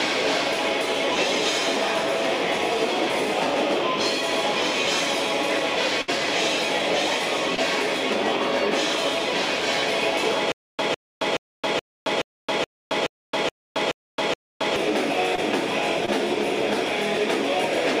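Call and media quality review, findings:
Burst of packet loss, 6.01–6.10 s: receiver concealment filled a 63 ms hole where roughly 60 ms of audio never arrived in time. The last sound is continued and decays before playback resumes further on. Spectrogram shows smeared, fading partials or noise, then an abrupt onset.

Short concealed packet loss, 7.56–7.60 s, 15.36–15.40 s and 16.06–16.09 s: each is a brief smear of about 20 ms where a 20 ms packet was lost and decoder PLC extrapolated the preceding pitch or shaped noise before cross-fading back. On the spectrogram, each shows a short blurred column.

Stutter with silent gaps, 10.52–14.76 s: a 154 ms fragment replays 10 times at a 424 ms period, separated by 270 ms silent gaps, likely from a player or stream stall with a retry loop. Waveform shows identical repeated blocks with silent gaps between them, and the intended audio is missing.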